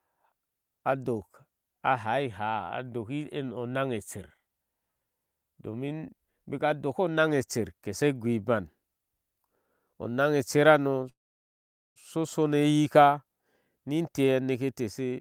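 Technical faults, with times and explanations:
11.09–11.98 s, call audio freeze: the audio stops for close to 0.9 s. A very brief continuation of the last sound dies away, followed by about 0.82 s of silence, and then the speech picks up exactly where it broke off. Packets were likely held up in transit and the jitter buffer ran dry. Nothing is lost, but the rest of the call now runs about 0.86 s later. On a spectrogram this shows as a short smeared tail, then a blank vertical band.
15.10–15.20 s, jitter buffer speed-up: in the final tenth of a second the speech runs at about 167% speed while keeping its pitch. The receiver had built up more buffered audio than it aims for, so it cut out short pitch-period slices, around 70 ms in total, to bring the delay back down. The result is a rushed, clipped ending. On a spectrogram the harmonics keep their spacing but the syllable timing compresses, and the waveform shows periods spliced closer together.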